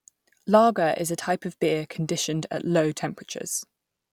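No technical faults turn up anywhere in this short bit of speech, so there's nothing to flag here.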